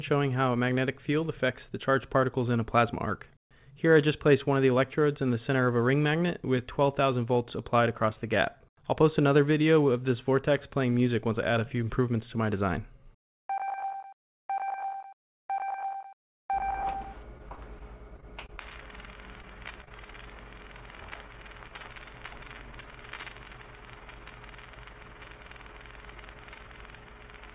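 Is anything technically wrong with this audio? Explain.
Yes. From 17.38 to 18.59 s and again from 19.81 to 20.16 s the audio turns choppy and robotic. This is repeated packet loss: gaps of up to about 23 ms keep recurring and are each patched by extending the preceding sound.

At 21.68 to 21.72 s a brief smear replaces the audio. That is short concealed packet loss, where roughly 20 ms went missing and was filled from the last sound before blending back.

All of this passes through a call path whose band stops at 4 kHz, which fits a 64 kbps G.711 mu-law codec.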